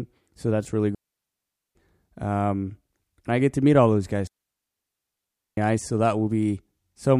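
Speech with two digital wireless dropouts, where the receiver muted after losing data: 0.95–1.75 s after "so that's really" and 4.27–5.57 s after "to meet all those". Each is a clean, near-silent hole with a quick fade and no hiss or noise burst, unlike an analogue wireless dropout.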